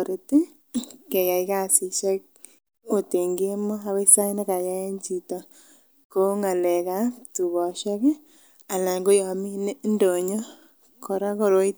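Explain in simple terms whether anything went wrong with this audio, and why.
Nothing went wrong with this audio, because no fault can be heard anywhere in the speech.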